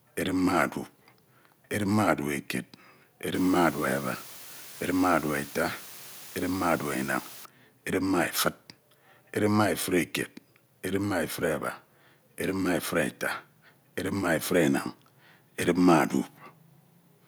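Low bit depth with dither runs from 3.34 s to 7.45 s, ending just before "edip ma". Here the speech is carried on only 6 bits, and random dither was mixed in before each sample was rounded. That randomness breaks up the rounding error so it no longer tracks the waveform. Instead of grainy distortion, it becomes a steady, even hiss, sitting roughly 20 dB under the speech for that whole stretch.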